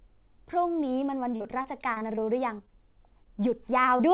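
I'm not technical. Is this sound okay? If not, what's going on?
No. From 1.36 to 2.19 s there is repeated packet loss (robotic sound): six short dropouts, patched by stretching the previous sound, make it choppy and mechanical. From 2.03 to 2.88 s a jitter buffer slow-down stretches the speech to about 95% speed. The receiver was rebuilding its safety margin, so the sound drags slightly at the same pitch. Short concealed packet loss hits at 2.58 to 2.61 s, 2.66 to 2.69 s and 3.97 to 4.01 s. Each time a few hundredths of a second went missing and was filled in, leaving a brief smear or wobble. Throughout, the call path carries nothing above 4 kHz, giving a telephone-like dullness.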